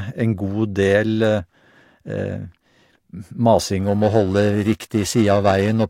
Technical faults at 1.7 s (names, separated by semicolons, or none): none